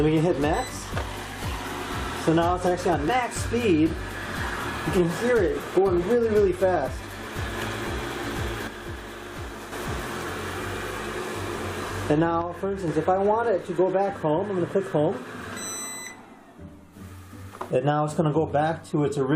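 The audio has a brief disturbance at 3.08 s, lasting about 16 ms, from damaged data in a compressed stream. The decoder misread or lost sync on corrupted frames there. On a waveform or spectrogram it shows as a narrow stripe or gap that breaks the surrounding texture. From 8.67 to 9.72 s and again from 12.42 to 12.88 s, the level drops abruptly by about 6 dB and then returns, most likely because one channel drops out before the mix to mono. The waveform envelope steps down to roughly half its height, and the spectrogram dims evenly across all frequencies for those spans.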